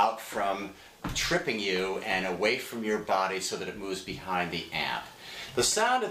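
Nothing stood out on listening to the audio.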